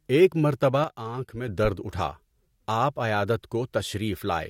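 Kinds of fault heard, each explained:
Sudden gain jump: at 0.84 s the speech and the background noise both drop by about 7 dB at once, with no fade, and at 1.48 s they snap back up just as abruptly. The likely cause is a digital level change applied from one sample to the next without a ramp. Unlike compressor pumping, the noise floor moves in lockstep with the speech and the level does not follow the loudness of the syllables.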